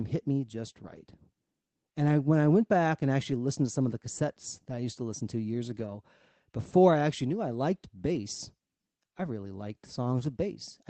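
At 0.83 to 0.97 s, just after "hit me just", a lost packet rebuilt from error correction plays about 80 ms of a low-bitrate copy, which fits four lost frames. The sound turns grainy and noisier rather than dropping out, and on a spectrogram the harmonics blur into a hazier band. At 5.75 to 5.78 s there is a short concealed packet loss. About 20 ms never arrived, and roughly 10 ms was filled by extending the preceding sound before fading back. It is heard as a brief smear or wobble. This runs straight into another error-correction rebuild from 5.78 to 5.88 s, after "to listen to years", with about 60 ms of coarser, hissier sound. At 8.14 to 8.16 s, after "actually knew I liked", a single rebuilt 20 ms frame adds a rough blip. Throughout, the call runs through Opus at 24 kbps with content reaching up to 8 kHz.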